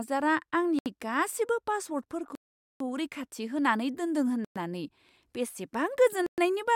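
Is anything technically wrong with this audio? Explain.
Yes. A Bluetooth stall occurs four times in this speech: at 0.79–0.86 s (71 ms of silence), 2.35–2.80 s (451 ms), 4.45–4.56 s (111 ms) and 6.26–6.38 s (115 ms). Each time the audio drops abruptly to silence and then resumes. The likely cause is radio interference delaying packets so the headphones' buffer emptied, with playback halting until retransmitted data arrived. The 451 ms gap is by far the longest.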